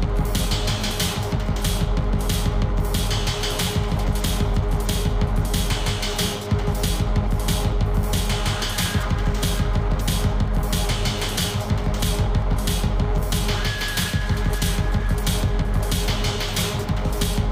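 Nothing here calls for comment, since no technical faults turn up anywhere in the recording.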